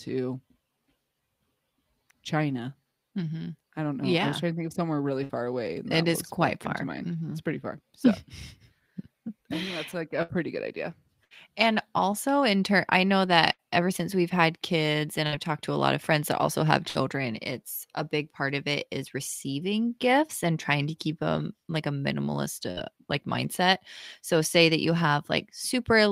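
Seven bursts of packet loss break up the speech, at 5.23, 10.22 (after "that's like a"), 11.24, 13.53 (after "in turn I know"), 15.26 (after "we've had kids and"), 16.88 and 22.71 s. Each time, a run of packets failed to arrive in time. The receiver stretched the last sound for about 60 ms, fading it, so voiced sounds turn into a brief buzz and others into hiss. Then about 60 ms of speech is simply gone.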